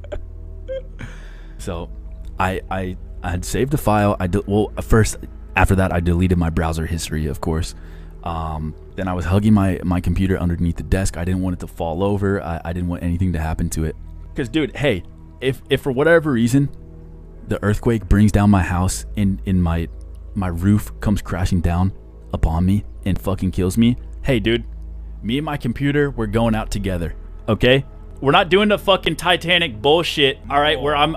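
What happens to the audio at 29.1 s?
At 29.05 s there is an underrun with held sample lasting about 12.5 ms. The output buffer ran dry, so the converter froze on its last sample value and the waveform goes flat instead of dropping to silence. When data returns, playback picks up roughly 15 ms further on, so a short stretch of audio is skipped. The held value, rather than a fall to zero, is what sets it apart from a plain dropout gap.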